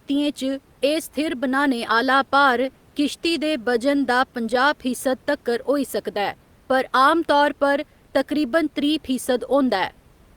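No technical faults can be heard anywhere in the recording. A faint background noise from the room sits about 36 dB below the speech.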